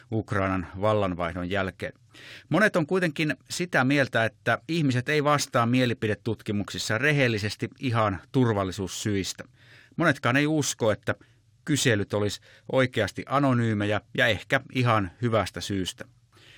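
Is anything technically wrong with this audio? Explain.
Yes. Crude rate conversion runs throughout the speech: samples were dropped without filtering, which fits a 48 kHz to 44.1 kHz change, leaving inharmonic fizz that tracks loud, bright sounds rather than steady hiss.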